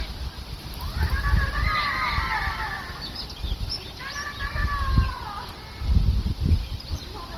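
A recording of sounds, smeared, swirly and hollow throughout, with blurred attacks. This is likely generation loss from about seven passes through Opus at 48 kbit/s. A doubled audio track runs from 0.58 to 3.26 s. A dry, full-band copy trails by about 300 ms, about 5 dB quieter, starting and stopping abruptly, likely from a second, slower capture path. Small jumps occur at 2.18, 3.02 and 5.72 s. Each skips ahead a millisecond or a few, likely a dropped buffer (overrun).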